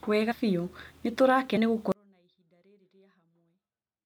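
Speech that jumps forward twice and then collapses to near-silence. At 0.30 to 0.32 s and again at 1.56 s the talker seems to lurch ahead, each time with a short smeared blip rather than a sharp click. These are compressed frames skipped: the decoder never played some frames, so the audio resumes later in the stream. The first jump loses roughly 70 ms and the second roughly 150 ms, which fits about three and about seven frames of 26.1 ms. The blur at each join comes from neighbouring frames overlapping. From 1.92 s to the end the speech cuts out abruptly rather than fading, leaving only a faint trace about 40 dB below its former level. This is an audio dropout to a faint residue, likely caused by the wanted signal being lost while the path after the break stayed live and carried only a weak leak of the sound.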